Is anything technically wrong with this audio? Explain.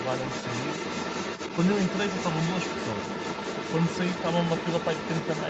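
Yes. A second voice leaks through for the whole clip, from 0.0 to 5.5 s. It sits only slightly below the main speech, roughly 5 dB down. This other side's voice leaking through is likely residual echo. The far end played from a loudspeaker, and the echo canceller left part of it in the microphone signal. The sound reaches about 8 kHz at most, which fits a call codec's bandwidth.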